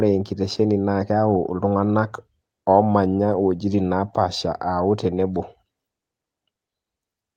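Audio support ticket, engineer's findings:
No audio faults found.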